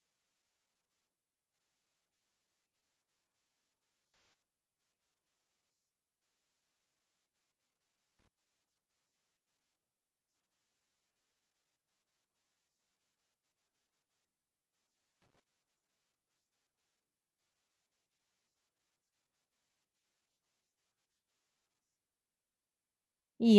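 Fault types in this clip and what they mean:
AAC frame loss with concealment: a run of compressed frames went missing, which fits about six AAC frames. The decoder covered the gap from the last good spectrum, so from 4.08 to 4.33 s the speech turns into a brief smeared, noisy patch.
Loose connector crackle: a worn or dirty contact in the signal path kept making and breaking, chopping the audio on and off. It is heard as two short, irregular bursts of crackle and scratching, at 8.19 to 8.28 s and 15.22 to 15.40 s.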